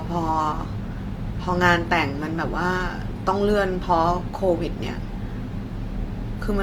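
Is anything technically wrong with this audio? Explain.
Yes. Throughout, the speech sounds grainy and rough, likely from Opus compression in music mode, which fills bit-starved bands with noise. That fits a rate near 24 kbps.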